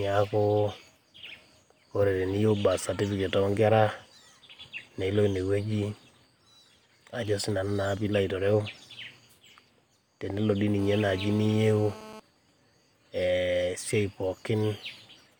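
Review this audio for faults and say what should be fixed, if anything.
There's GSM phone buzz from 10.79 to 12.2 s: a steady, raspy 217 Hz rasp about 18 dB under the speech, from a nearby phone's call bursts getting rectified. Keep phones off or well away from the mic and cables.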